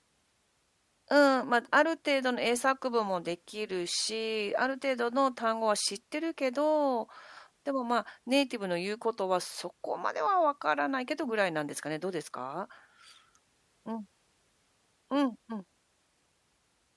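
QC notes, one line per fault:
No faults heard in this speech recording.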